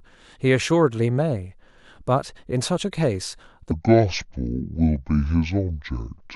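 From 3.71 s to the end, the speech becomes a section at the wrong speed: it runs at about 0.59 times its proper rate, so it sounds slow, heavy and deep, dropping by roughly ten semitones at once. The likely cause is playback or editing against a mismatched clock. On a spectrogram, harmonics and formants shift sharply downward and stretch out in time; the waveform's syllable envelopes widen to match.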